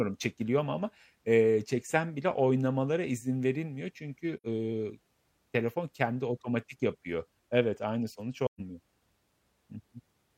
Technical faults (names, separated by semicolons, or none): AAC frame loss with muting